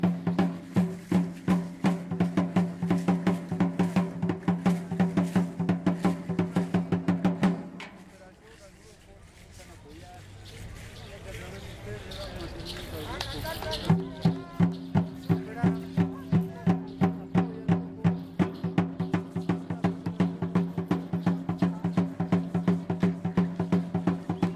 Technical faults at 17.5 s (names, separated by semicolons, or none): none